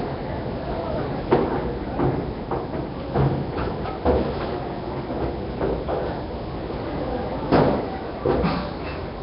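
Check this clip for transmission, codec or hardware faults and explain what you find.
There's one fault, and it runs the whole way through. From start to finish the audio has a rough, hissy halo and a smeared, underwater quality, with nothing above 5.3 kHz. That points to heavy Nellymoser compression, likely the old Flash Nellymoser Asao codec at a low bitrate around 22 kbps. Its fixed, tight bit budget starves the weaker bands, which get filled with noise, so detail smears and turns grainy.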